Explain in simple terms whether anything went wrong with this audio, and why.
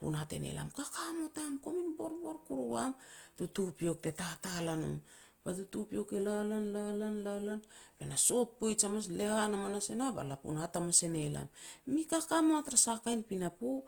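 The speech sounds rough and grainy from start to finish, with a noisy, sandy texture around the tones where they should sound smooth, even though the treble is not cut off. This is most likely Opus compression. At a low data rate, Opus in its music mode keeps the overall level of each frequency range but fills in missing detail with copied or random noise, which causes that grainy roughness.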